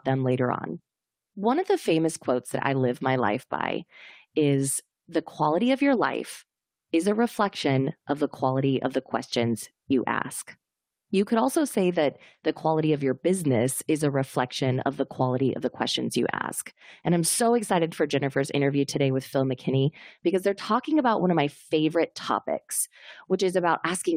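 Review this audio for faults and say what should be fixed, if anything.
Nothing needs fixing: the speech recording shows no technical faults anywhere in its duration.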